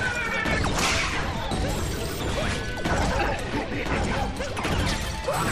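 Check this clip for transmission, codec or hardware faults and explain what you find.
One hardware fault stands out, a CD skip at 1.51 s. The player's laser lost its track, most likely from a knock or a flaw on the disc, and landed on a different turn of the spiral. The output mutes for only a few milliseconds, heard as a brief tick, and the sound then resumes from another point on the disc rather than where it left off, so the flow of the audio breaks with an abrupt jump.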